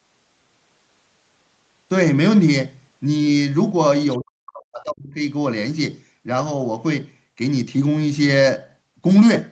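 An echo canceller likely treated overlapping talk as echo. In this speech recording, that produced speech suppressed in double talk from 4.18 to 5.2 s: the talker's level plunges by up to roughly 40 dB for about a second, while the call path caps the sound near 8 kHz.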